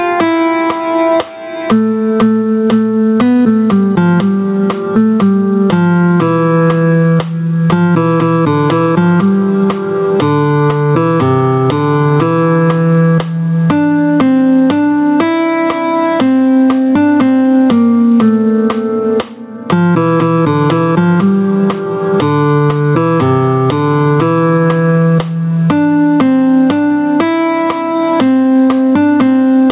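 Gain pumping runs through the whole recording: the gain ducks by around 15 dB under loud moments, most likely from input gain set too hot with a fast limiter clamping down. The call-path band limit, with nothing above 4 kHz, fits a G.711-style telephone codec.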